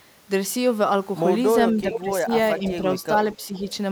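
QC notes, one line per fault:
1.73–2.31 s and 3.37–3.66 s, speech suppressed in double talk: the speech dips in level and thins out in patches, deepest by about 10 dB in the first span and about 5 dB in the second, for roughly a third of a second and then half that in total. This is likely an echo canceller that heard both ends talking together, could not separate the near talker from loudspeaker echo, and turned everything down.
1.92–1.99 s, 3.32–3.36 s and 3.54–3.66 s, echo leak: short scraps of a delayed copy of the speech, arriving 426 ms late. The first is loud, only about 5 dB under the direct speech; the later two are faint, around 25 dB down. The likely cause is a far-end loudspeaker whose echo canceller did not remove everything its microphone picked up, so the remainder was sent back down the line.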